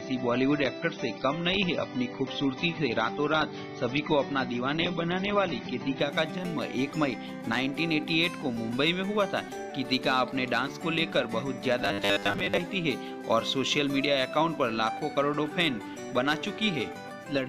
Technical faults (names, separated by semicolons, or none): adaptive stream starting at a low bitrate; robotic sound from repeated short buffers